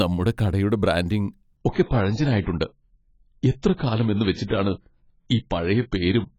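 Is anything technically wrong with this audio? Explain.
Yes. From 1.57 s to the end, right after "നമ്മുടെ കടയുടെ ബ്രാൻഡിങ്", the speech suddenly drops in quality with no gap. That's an adaptive stream switching to a lower bitrate. The connection slowed, so the player moved to a leaner version of the stream. It sounds like a step down from roughly 96 kbit/s AAC to around 16 kbit/s. Nothing remains above 7.7 kHz, so the top end goes dull, and compression artefacts get thicker.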